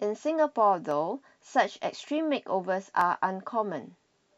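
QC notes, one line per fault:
0.91 s, 2.08 s and 3.01 s, dropped samples: the stream likely lost a few samples, a fraction of a millisecond each time, so the speech waveform jumps abruptly to a later value. Each jump is heard as one sharp, brief click.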